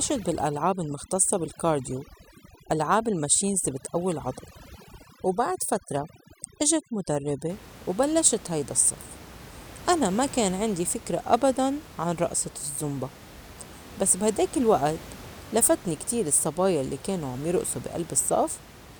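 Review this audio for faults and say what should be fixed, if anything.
From 0.0 to 7.50 s there is overdone noise removal: a reduction stage set too aggressively gates individual frequency bands whenever they sit near its noise estimate, so the background drops and breaks up into twinkling specks. Unlike low-bitrate codec smearing, the artefacts follow the noise floor and vanish after 7.50 s, where the room noise, about 19 dB below the speech, returns. Set the reduction depth gently enough that the room noise is lowered rather than removed outright.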